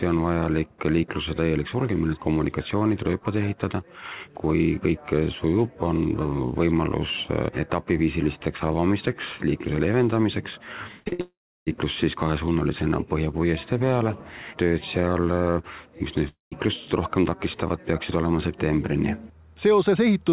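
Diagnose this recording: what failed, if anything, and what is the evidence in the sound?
The network is the failing stage, beginning with two bursts of packet loss at 11.00–11.08 s and 11.13–11.21 s. Each removes about 60 ms of audio. The receiver covers roughly 55 ms of each gap by extending the last sound, which turns into a held buzz or fading hiss that drops in level across the hole. The audio then resumes further along, with that stretch gone.

Between those two bursts, at 11.08–11.13 s, there is a short concealed packet loss of about 40 ms. The decoder fills it by continuing the preceding sound, then crossfades back into the real signal. It is heard as a brief smear or wobble rather than a clear gap, and a short transient in that window can disappear entirely.

The run of losses ends in a long network dropout at 11.21–11.68 s, likely a stall in packet delivery. About 460 ms is missing. 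Concealment produces a decaying buzz or hiss that leaves roughly 320 ms of silence before the audio returns further on. A second dropout at 16.29–16.54 s loses 240 ms, with about 140 ms of silence after the fill fades. Throughout, the G.711 mu-law call path limits the band to nothing above 4 kHz.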